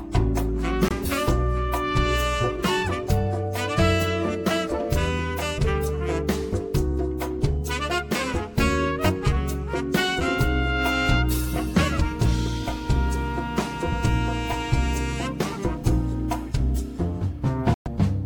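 Short gaps hit at 0.88 to 0.93 s and 17.74 to 17.88 s, about 23 ms then 116 ms of silence, likely a Bluetooth dropout, with the sound resuming as though it had played on through the gap.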